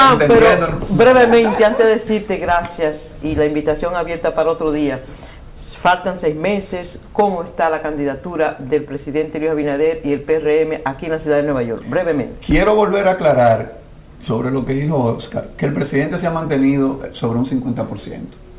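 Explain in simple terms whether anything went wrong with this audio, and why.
Nothing went wrong; I hear no faults anywhere.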